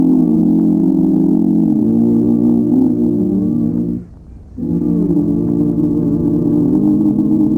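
Sample clock jitter runs through the whole clip. The converter's clock wanders by a few microseconds, so each sample lands slightly off its proper instant, and the resulting error scales with how steeply the waveform is changing. It sits at around 45 dB below the signal, heard as a faint hiss or grit that swells on loud, bright passages and disappears in quiet gaps. A spectrogram shows a diffuse noise haze tracking the louder, high-frequency content, with no trace in the pauses.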